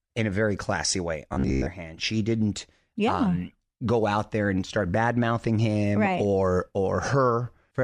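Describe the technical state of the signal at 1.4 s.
Robotic sound from repeated short buffers runs from 1.33 to 1.68 s, just after "a very classy way" and before "hand she didn't yeah". Most of that span is a repeated fragment of about 15 ms, likely filling gaps where fresh audio arrived too late. The repeats impose a rigid 66.8 Hz metallic buzz that still loosely tracks the speech.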